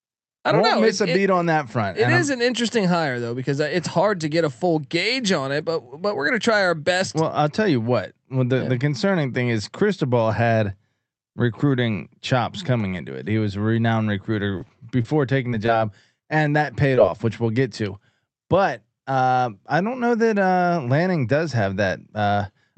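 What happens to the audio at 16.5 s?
At 16.5 s the sound is in a burst of repeated packet loss (robotic sound) running from 14.51 to 16.99 s. Twelve short holes, none longer than 34 ms, are each patched by stretching the preceding sound, producing a choppy stutter with pieces missing rather than one clean dropout.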